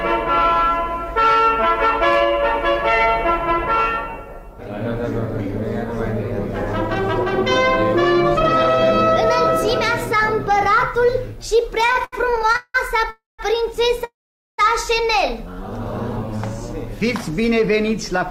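From 11.81 to 12.76 s the audio drags and stutters through a dozen short stalls, the longest about 180 ms, with roughly 43% of that stretch held on repeated sound. These are repeated stalls (stutter): packets arrived late, so the jitter buffer kept emptying while the receiver extended the last sound. Nothing is lost, only delayed.

At 13.10 s the sound hangs for about 0.28 s, fading into silence for 170 ms before resuming where it stopped, and at 14.04 s a longer hold of about 0.54 s goes silent for 450 ms. Each is a call audio freeze, likely from packets held up in transit emptying the buffer.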